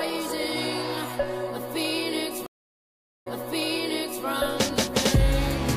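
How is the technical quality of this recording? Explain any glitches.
The recording has one glitch, a stream reconnect between 2.46 and 4.24 s. The connection dropped, so the player lost its feed, waited, re-established the link and started a new decoder partway through the stream. You hear the sound cut to about 0.8 s of silence. When it comes back, the server has resent a burst, so playback picks up about 0.98 s earlier than where it stopped. Nearly a second of material is repeated, with a soft or muted onset as the fresh decoder starts.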